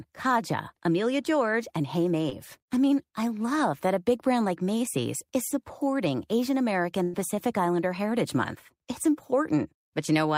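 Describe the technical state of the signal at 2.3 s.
At 2.29 to 2.33 s there's a short concealed packet loss: the decoder papered over a gap of about 20 ms by extending the previous sound, leaving a quick smear.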